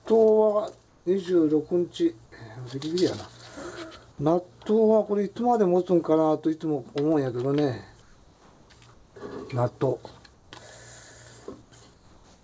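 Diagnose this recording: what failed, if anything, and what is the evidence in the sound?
In the pauses at 0.88–1.06, 8.02–8.70, 8.94–9.16, 10.34–10.52, 11.62–11.72 and 11.94 s to the end, a flat, featureless hiss about 3 to 5 dB quieter replaces the real background. This is comfort noise, likely from call-path discontinuous transmission, not a noise gate, which would leave silence.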